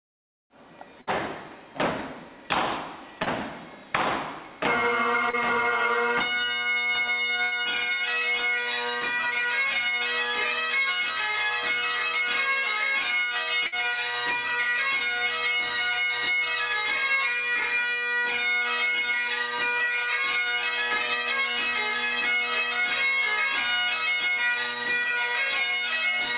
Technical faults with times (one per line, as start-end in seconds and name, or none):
1.01-1.10 burst of packet loss
3.23-3.29 short concealed packet loss
5.30-5.36 short concealed packet loss
7.43-7.54 burst of packet loss
13.66-13.75 burst of packet loss